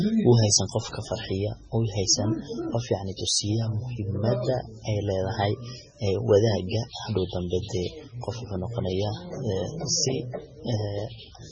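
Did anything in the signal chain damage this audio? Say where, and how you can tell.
Yes. MP3 compression damages the speech throughout the clip. Nothing reaches above 9.9 kHz, and the sibilants sound swirly and watery, which is likely a lossy encode at a very low bitrate near 16 kbps, where the encoder cuts the treble and drops quiet spectral lines frame by frame.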